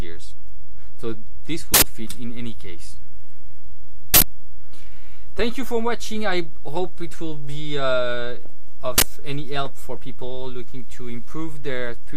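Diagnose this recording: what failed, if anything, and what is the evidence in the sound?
The failure is at the driver or buffer stage: an uninitialised buffer, three times over. You get harsh bursts of digital noise at 1.74–1.82 s and 4.14–4.22 s, each lasting 80 ms, and a shorter 40 ms one at 8.98–9.02 s. What's happening is that a block got handed to the output before any audio was written into it, so whatever junk was sitting in that memory went out as samples, loud and nothing like the surrounding sound.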